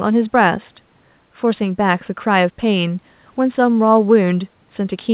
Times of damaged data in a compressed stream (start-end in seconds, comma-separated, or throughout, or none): none